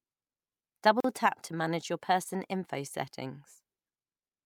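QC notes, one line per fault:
1.00–1.04 s, gap at a join of encoded pieces: the speech drops to silence for about 40 ms, then resumes exactly where it stopped. Two separately encoded pieces were joined untrimmed, so encoder start delay and end padding remain. The codec softens the edges.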